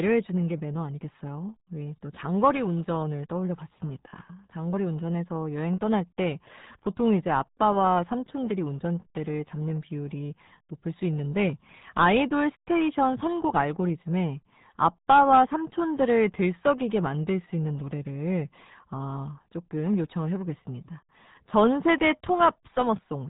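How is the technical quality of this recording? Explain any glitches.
Technical quality is poor, with one fault running through the whole clip. RealAudio 14.4 codec, present from start to finish: this dial-up era speech coder squeezes the signal into a tiny data rate, consistent with roughly 8 kbit/s. Everything above 3.8 kHz is discarded, and heavy coding damage leaves the speech muffled and gargly.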